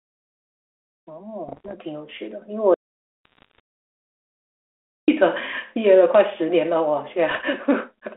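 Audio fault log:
1.48–1.75 s, 3.25–3.60 s and 7.31–7.43 s: bit errors on an ADPCM link. Flipped bits, up to about one percent, throw off the 32 kbit/s G.726 decoder's step size and predictor, causing pops and rough, ringing bursts.
2.74–5.08 s: audio dropout to silence. The sound cuts out for 2.34 s into silence with no room tone, most likely from a lost input or failed link.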